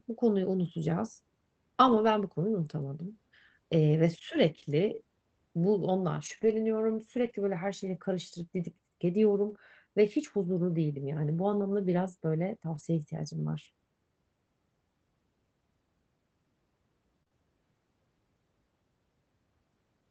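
At 1.87–2.09 s, 6.25–6.51 s, 7.17–7.31 s, 9.49–9.51 s and 12.75–12.81 s, lost packets were rebuilt from error correction. Low-bitrate backup copies filled each hole, so nothing drops out; those stretches just turn rougher and noisier.

At 9.53–9.57 s, and in two back-to-back stretches at 17.23–17.28 s and 17.28–17.33 s, there is short concealed packet loss. With no backup copy, the decoder extended the preceding sound, giving a brief smear or wobble rather than coarse noise.

All of this rides on a call codec limited to about 8 kHz.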